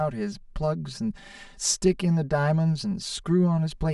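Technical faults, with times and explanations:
Throughout, channel delay (comb filtering): the speech sounds hollow and phasey. One channel runs roughly 5 ms behind the other, so summing them to mono cancels shared content at evenly spaced notches starting near 100 Hz.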